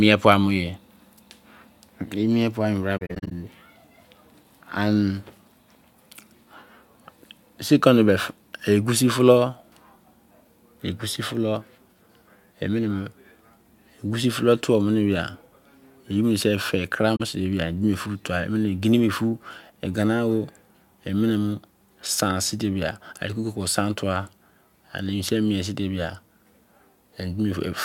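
At 2.97 to 3.32 s, then 17.16 to 17.21 s, AAC frame loss with muting leaves soft gaps. The decoder zeroes lost frames. Sound fades out and back in.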